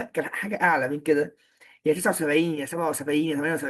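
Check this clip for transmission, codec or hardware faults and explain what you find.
Listening through the speech, I find no faults to report. Nothing at any moment in the clip calls for a closer look.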